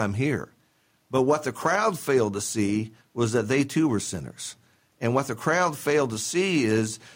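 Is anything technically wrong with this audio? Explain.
No, nothing technically wrong is audible in this speech recording.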